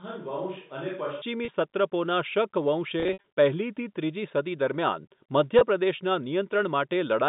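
From the first moment until 1.22 s, the speech sounds hollow and roomy. It is thin in the bass and about 10 dB quieter than what follows. Room noise sits about 35 dB beneath it. The likely cause is a switch to a distant microphone, with the close microphone's signal missing. At 1.22 s the close sound returns abruptly.

Packet loss with pitch repetition occurs three times. At 1.45 s, about 30 ms drops out. The receiver fills the gap by repeating the last pitch cycle, so the sound is briefly held and buzzy. Between 3.0 and 3.24 s, losses totalling 140 ms are scattered over 240 ms. The longest gap runs 60 ms, long enough for the repeated cycle to fade toward silence before the speech cross-fades back. At 5.59 s, a 20 ms loss gives another short, held buzz. The narrow telephone band, around 150 Hz to 3.7 kHz, is consistent with G.711 coding.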